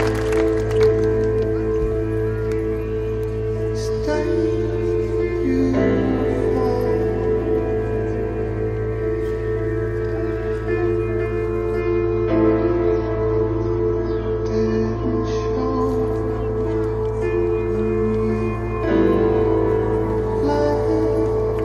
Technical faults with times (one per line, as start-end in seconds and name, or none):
11.81-15.81 adaptive stream at a lower bitrate